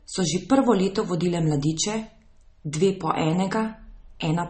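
From the first moment to the end, the speech sounds like it went through transcoding between lossy codecs, most likely a low-rate MP3 pass followed by an AAC-LC encode. Nothing survives above about 8.4 kHz, the lowest cut-off in the chain, which the later encode couldn't restore. On top of that you get two layers of smearing and swirly artefacts stacked together, the kind you'd expect from roughly a 32 kbit/s MP3 re-encoded at around 48 kbit/s.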